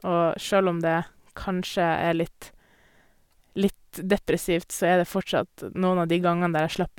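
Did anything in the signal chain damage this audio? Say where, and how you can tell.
No, nothing in the chain audibly damaged this speech.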